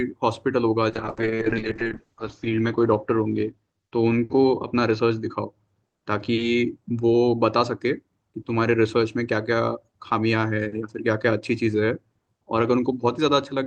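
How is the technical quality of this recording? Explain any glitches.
The recording has one clear quality problem: a stretch of degraded, muffled speech near the start of the call.

From 0.9 to 7.85 s there is a call bitrate drop. The call's bandwidth estimate fell, so the Opus encoder coded the speech with far fewer bits. Quantisation became coarse and the audio band narrowed from about 12 kHz to 8 kHz. The worst point lasts about 1.4 s and sounds like a rate near 7 kbps. Speech turns rough, watery and dull. Unlike packet loss, the degradation is continuous, with no gaps or robotic repeats. Unlike a plain low-pass filter, it adds grainy artefacts and clears up once the bitrate recovers.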